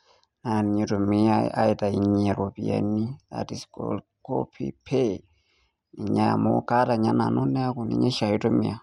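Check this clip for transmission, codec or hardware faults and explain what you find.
No faults turned up when checking this clip.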